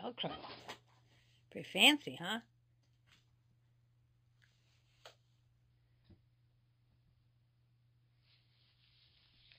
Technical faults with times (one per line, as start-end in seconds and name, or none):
0.60-5.70 imaging from linear upsampling